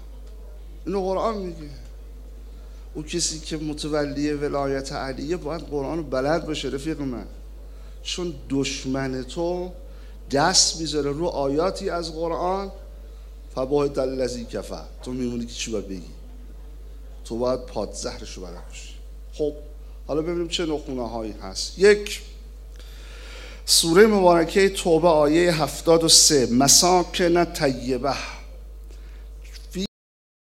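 At 29.86 s the audio has a cut-off end. The sound stops abruptly mid-event. There is no natural decay. It drops straight to digital silence for the final 0.61 s. The last buffers were never written or played out.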